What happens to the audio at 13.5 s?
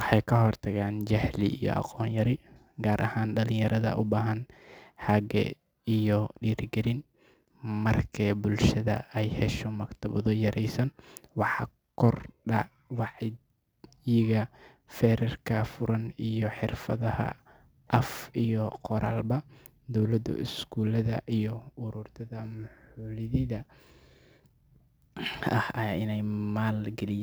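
At 13.5 s, as everywhere in the recording, the speech carries sample clock jitter. The converter's clock wanders by a few microseconds, so each sample is captured slightly early or late. Where the waveform changes fastest, that timing error becomes an amplitude error, sitting around 35 dB below the signal. The result is a faint hiss and roughness riding on the voice, strongest in loud, bright sounds and gone in the pauses.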